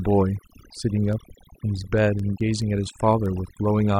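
Throughout, the speech sits over a near-silent, twinkling background: overdone noise removal, pulling frequency bands down wherever they resembled the noise. From 0.28 to 3.9 s, around twenty sharp ticks of uneven strength arrive about five times a second. These are word clock ticks, each a single dropped or repeated sample where unlocked clocks slip, with a rate that fits a mismatch of roughly a hundred parts per million.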